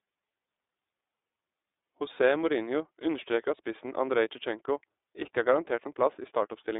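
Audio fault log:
Throughout, iLBC codec: the speech is confined to a telephone band of roughly 300 Hz to 3.7 kHz, with nothing above 3.8 kHz, so sibilants and breath lose their top end. The damage is plainly audible as a rough, slightly synthetic texture. Each 30 ms frame's excitation is coded on its own, without drawing on the previous frame, and the result fits the 13.33 kbps mode of the codec.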